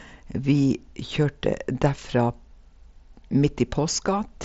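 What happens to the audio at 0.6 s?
Nothing goes wrong at 0.6 s: the speech passes through intact there, with only the band limit near 7.7 kHz and the light graininess expected of the Bluetooth mSBC headset codec it travels through.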